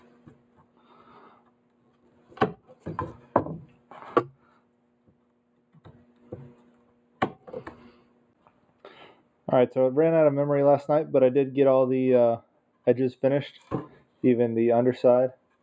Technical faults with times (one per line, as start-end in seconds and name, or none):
0.00-15.63 noise suppressor applied to music or sounds
0.00-2.86 sound cut by the noise suppressor
3.17-3.35 sound cut by the noise suppressor
3.66-3.93 sound cut by the noise suppressor
4.33-4.70 sound cut by the noise suppressor
5.58-9.28 sound cut by the noise suppressor
13.61-14.23 sound cut by the noise suppressor